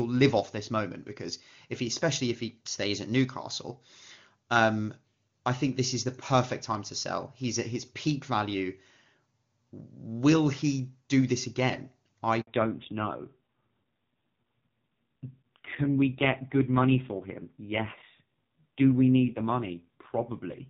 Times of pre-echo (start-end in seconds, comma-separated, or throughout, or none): none